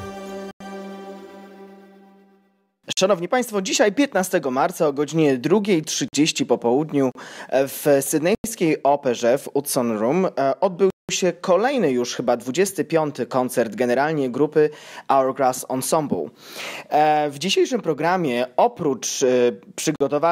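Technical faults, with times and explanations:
0.51–0.60 s, 2.93–2.97 s, 6.08–6.13 s, 7.12–7.15 s, 8.35–8.44 s, 10.90–11.09 s, 19.96–20.01 s: block of digital silence. The audio drops to silence for 36 to 186 ms, cutting out and back with no fade. Most gaps fit whole 2048-, 4096- or 8192-sample buffers left unfilled.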